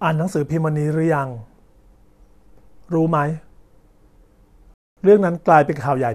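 A rebuffering stall interrupts this speech recording: the player's downloaded audio ran dry and playback halted until more data arrived. From 4.74 to 4.97 s the speech drops to silence, and it then picks up at exactly the point where it stopped, with nothing skipped or repeated. The pause adds about 0.23 s to the running time rather than removing any of the speech.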